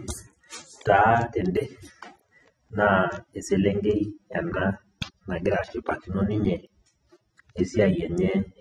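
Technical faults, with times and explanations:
Throughout: AAC compression. The speech sounds dull and smeared, with warbling vowels and fizzy sibilants. Nothing reaches above 13.8 kHz. A spectrogram shows a flat shelf at that cut-off, likely from low-bitrate AAC-LC, around 24 kbps.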